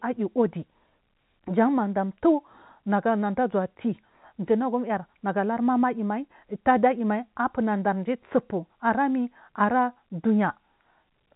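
No technical faults can be heard in this speech recording.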